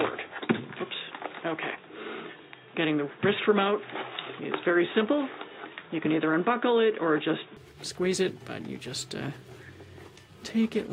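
From the very start up to about 7.57 s, the sound is narrow and boxy, with nothing above 3.8 kHz, and a faint new noise floor sits roughly 35 dB under the signal. Then it opens up cleanly with no gap and no real jump in level. That's most likely an input switched to a poorer device, something like a headset's call profile, before the recording moved back to the fuller-range source.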